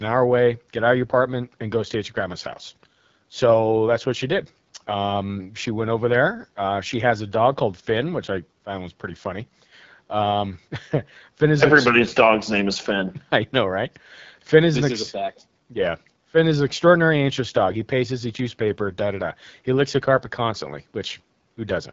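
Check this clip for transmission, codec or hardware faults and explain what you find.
One fault runs through the whole speech clip: AMR wideband (HD Voice) codec damage, plainly audible from start to finish. The roughness suggests one of the lowest AMR-WB modes, which fits about 8.85 kbit/s, too few bits for the pulse-driven vocal tract model to track the voice closely. Voices come out rough and raspy, with a gritty, buzzy texture. Nothing is present above 7.6 kHz, and the top band carries only shaped noise, not real detail.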